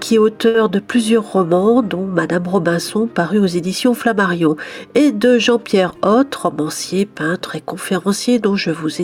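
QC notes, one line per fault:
0.47–0.56 s, short stall from a late packet: A packet arrived late, the jitter buffer ran dry, and the receiver stretched the last bit of sound by about 70 ms until data resumed at the same point. Nothing is lost, but one moment is held too long. On a spectrogram the harmonics run flat and smeared across the gap. In the waveform a short stretch of repeated cycles appears, and everything after it sits 70 ms later.
5.84–6.47 s, jitter buffer speed-up: The buffer held more audio than its target, so the receiver trimmed it back by cutting out many short pitch-period slices in a row. The sound plays at 110% speed with unchanged pitch and comes across as rushed, about 70 ms shorter in total. On a spectrogram the events over this span look compressed in time while harmonic spacing stays the same. The waveform shows small splice points where cycles were dropped.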